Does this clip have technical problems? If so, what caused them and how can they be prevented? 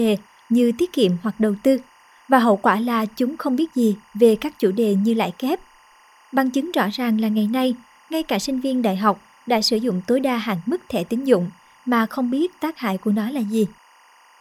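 Yes. Timecode bleed runs through the whole speech clip: a faint chirping warble, roughly 35 dB below the speech, hopping between pitches around 1 and 2 kHz. Linear timecode from an adjacent track or cable is leaking in, and its pattern repeats in a way that fits 24 frames per second. Unlike a steady whine or hum, it alternates between two pitches with a regular, rhythmic stutter. To prevent it, keep timecode lines physically separated from audio runs and use balanced, shielded cabling.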